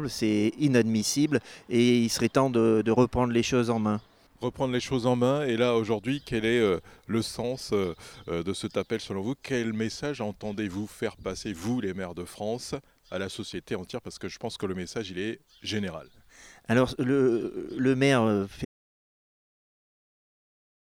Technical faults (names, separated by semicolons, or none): audio dropout to silence